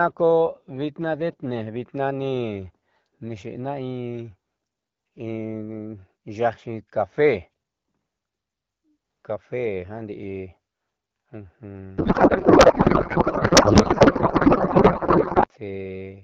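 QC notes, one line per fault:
11.98 to 15.48 s, codec payload misread. Speech turns into garbled noise and warble that barely follows it. Octet-aligned AMR-WB frames are read as bandwidth-efficient. Every field lands in the wrong place. The misread ends at 15.48 s.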